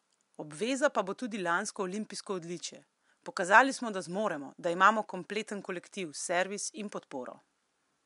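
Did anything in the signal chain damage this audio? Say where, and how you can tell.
No, nothing in the signal chain has damaged this speech recording. A faint room noise sits well below the speech, about 54 dB down, and it belongs to the space where the microphone was rather than to any stage of the chain.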